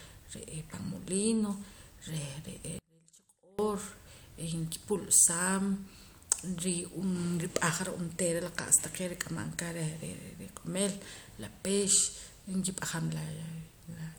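From 2.79 to 3.59 s, one channel was likely inverted: one side of the stereo pair appears to have had its polarity reversed, so when the two sides are summed to mono, the speech they share cancels. For that 0.8 s the level falls by about 32 dB, and the centred voice nearly disappears. What remains is only the small difference between the channels, a faint trace of the speech until the full level returns.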